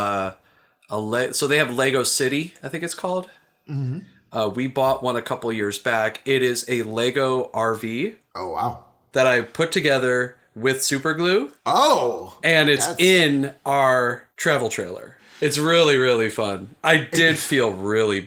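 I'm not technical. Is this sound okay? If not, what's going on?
Yes, it sounds fine; nothing here needs fixing.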